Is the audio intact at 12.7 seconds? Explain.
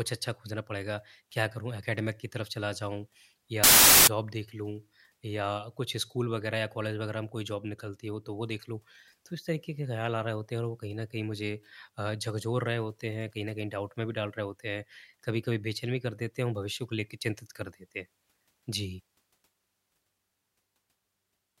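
Yes, at 12.7 seconds the speech plays through intact, with no audible dropout, click, distortion or other fault at that moment.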